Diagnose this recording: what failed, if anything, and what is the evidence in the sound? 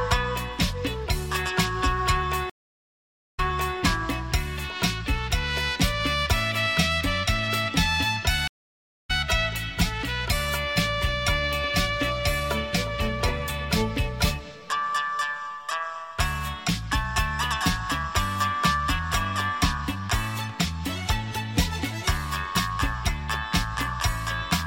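Two stream reconnects, so it's the network. At 2.50 s it drops silent for 0.86 s, then at 3.77 s a fresh decoder picks up 0.42 s earlier, a resent burst. At 8.48 s, 0.59 s of silence, then it jumps roughly half a second ahead.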